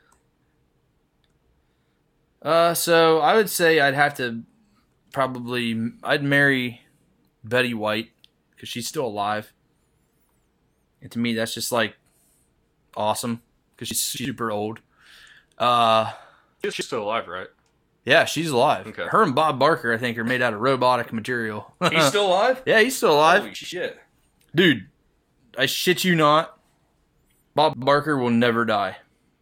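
Chunks out of order occur at 13.91 to 14.25 s just after "awesome because", at 16.64 to 16.81 s before "still alive right", at 23.55 to 23.72 s, and at 27.56 to 27.82 s. Blocks of about 85 ms play late by three, one, one and two blocks respectively. Nothing is missing, but each spot sounds jumbled, with hard joins where the order breaks.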